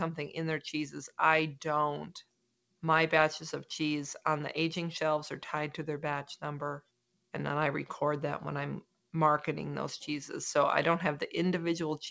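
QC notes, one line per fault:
Throughout: noise suppressor applied to music or sounds. A speech-tuned suppressor treats sustained tones and reverb as noise, so held sounds and tails pump by about 5 dB while attacks pass. On a spectrogram, steady partials flicker in level and the waveform envelope breathes. The call path's band limit is also visible, with nothing above 8 kHz, consistent with G.722.
2.23–2.83 s, 6.81–7.34 s, 8.82–9.14 s: sound cut by the noise suppressor. Each time, the suppressor mistook a steady or decaying sound for noise and dropped it by about 21 to 22 dB for roughly half a second, a third of a second in the last case. The waveform shows sudden envelope dips, and on a spectrogram whole decays are truncated.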